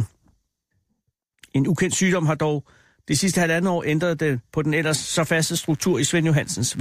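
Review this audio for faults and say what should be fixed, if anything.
Mains buzz comes in at 4.85 s, right after "ændret det på den", and runs to the end of the speech at 6.81 s, sitting well below the speech level. Sharp spikes from a dimmer, rectifier or unshielded cable entering twice per 50 Hz cycle create a dense stack of harmonics that reach into the kilohertz range, so it sounds raspy. Plain hum, by contrast, is a smooth, low 50 Hz tone. To prevent it, use shielded, balanced cabling and keep the recording chain away from dimmers and switching supplies.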